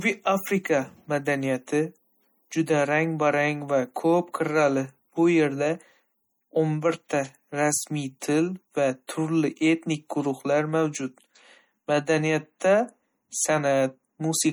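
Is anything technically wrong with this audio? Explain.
Yes. Throughout the speech there is a plainly audible watery, swirling quality, with smeared consonant attacks and metallic chirps on s sounds, and nothing above 21.1 kHz. This is likely MP3 compression, with weak frequency lines dropping in and out as bits run short, which fits a low bitrate near 48 kbps.

At 9.07 s a brief hiss lasting about 16 ms leads into a sharp attack, softening it. This is pre-echo: the codec spreads quantisation noise across the whole block, so noise sized for the loud onset also fills the quiet moment before it.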